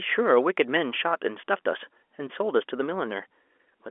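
Speech carried over G.711 telephone coding, its bandwidth held to the 300 Hz to 3.4 kHz line band as the format intends, with no technical faults to report.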